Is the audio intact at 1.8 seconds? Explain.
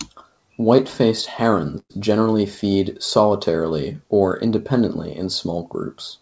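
No: a burst of packet loss runs from 1.78 to 1.92 s, just before "generally feed solitarily or". About 120 ms of audio is gone. The receiver stretches the last sound and fades it toward silence, showing as smeared, repeating spectral bands that decay, then an abrupt restart.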